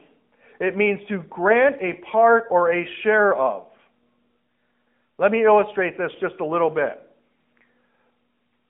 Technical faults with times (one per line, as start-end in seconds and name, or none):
0.00-8.69 AMR narrowband mobile codec